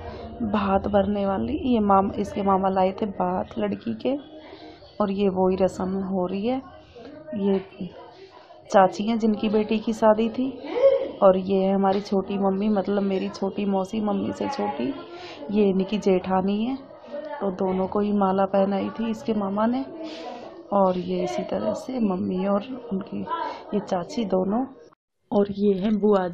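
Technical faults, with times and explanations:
No technical faults can be heard anywhere in the recording; the signal stays continuous throughout.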